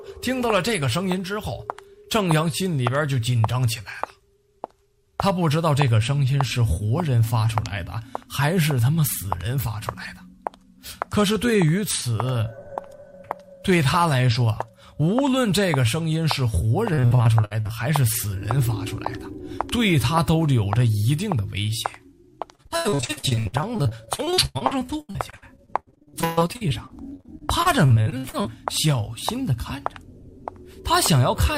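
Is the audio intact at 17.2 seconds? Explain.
No. Repeated packet loss (robotic sound) runs from 16.93 to 17.71 s, right across 17.2 s. Pieces of the stream went missing again and again, and each hole was bridged by stretching the last received sound forward before the next hole arrived. About 340 ms of the 0.78 s stretch, roughly 44%, is this patched-in material, with the longest hole 58 ms. The sound comes out choppy, with fragments lost.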